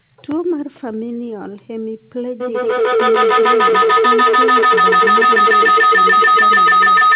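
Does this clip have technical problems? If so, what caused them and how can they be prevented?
Yes. A feedback howl starts at 2.4 s and runs to the end: sound from a loudspeaker re-enters a microphone on the same call, gains level each loop, and narrows to a tone near 1.5 kHz, with the loop repeating about every 150 ms, peaking about 12 dB above the speech. Prevent it by muting all but one device per room or using headphones.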